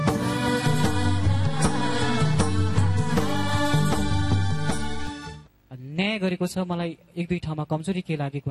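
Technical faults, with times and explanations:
0.67 to 5.07 s, DC step: the waveform's zero line suddenly shifts by about -27 dBFS at 0.67 s and returns at 5.07 s. Each jump is a near-instant change in level with no oscillation, so it sounds like a low thump or click at both edges, while the sound itself carries on unaltered. On a waveform the trace sits visibly off-centre between those times. A spectrogram shows a brief broadband, bass-heavy vertical stripe at each transition.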